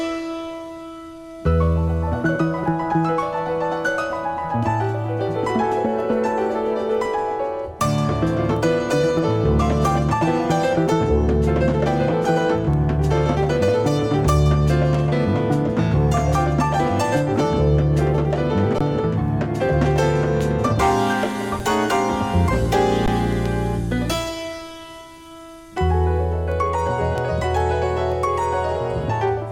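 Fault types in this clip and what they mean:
Underrun with held sample: at 18.78–18.81, 21.6 and 23.06 s the output buffer empties, the waveform holds flat, then resumes after skipped audio.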